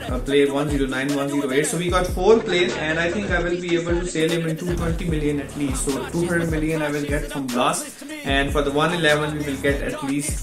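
From 2.2 to 4.2 s the adaptive stream switches to a lower bitrate: treble vanishes above 8.3 kHz and codec artefacts thicken, fitting a step from 128 to about 47 kbit/s MP3. Unlike a dropout, there is no gap. Quality simply shifts, then returns.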